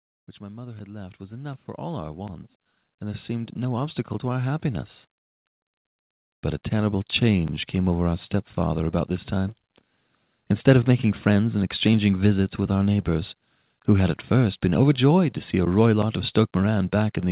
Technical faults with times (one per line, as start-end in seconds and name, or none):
0.38-4.95 automatic gain rising